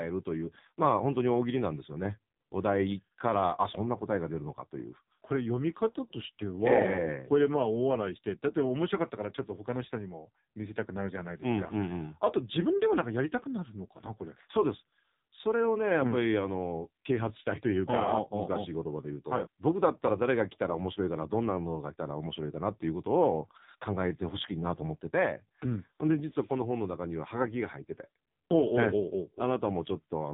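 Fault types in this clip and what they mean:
AMR narrowband mobile codec: throughout, nothing above 3.8 kHz survives, and heavy low-bitrate coding, consistent with about 5.9 kbps, leaves the speech buzzy and synthetic.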